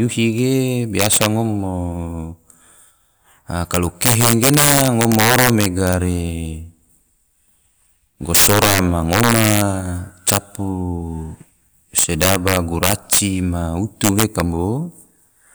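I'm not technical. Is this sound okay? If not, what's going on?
No. The loudest moments of this speech overran the largest number the system could store. This is called integer overflow. Instead of being capped, those peaks wrapped around to the opposite extreme, producing harsh, violent cracks much sharper than ordinary distortion. It happens at 0.99 to 1.26 s (just before "ngom mo"), 3.74 to 5.94 s, 8.35 to 9.61 s (the most severe stretch), 10.28 to 10.37 s, 11.98 to 13.19 s, and 14.04 to 14.4 s.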